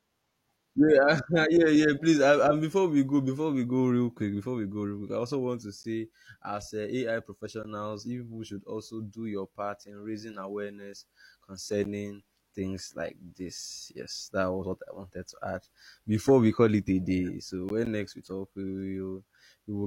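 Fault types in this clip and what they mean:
Gap between chunks: The speech arrives in blocks of 6 s, and silence is left at each join. This gives three hard-edged holes of 12 ms, at 5.83 s after "I also want to", 11.84 s and 17.85 s. No sound is lost.
Gap between stream segments: The audio comes in 2 s segments whose time stamps leave a small space. The player fills that space with silence. Two sharp holes of about 14 ms result, at 7.63 s before "you people should also" and at 17.69 s.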